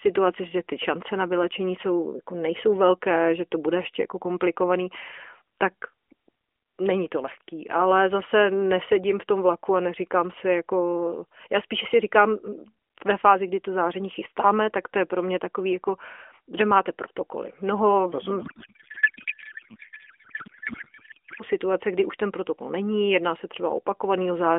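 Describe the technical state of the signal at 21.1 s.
At 21.1 s the signal is inside a codec payload misread running from 18.42 to 21.43 s, ending just before "situace kdy už ten". The decoder is unpacking AMR frames with their fields shifted, which fits octet-aligned frames being read as bandwidth-efficient. The speech becomes garbled warble that barely tracks it. Unlike packet loss, there are no gaps or concealment repeats, just continuous nonsense until the packing matches again.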